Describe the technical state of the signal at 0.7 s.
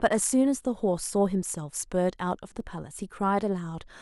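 At 0.7 s the signal is intact, with no audible dropout, distortion, clipping or other fault at that point.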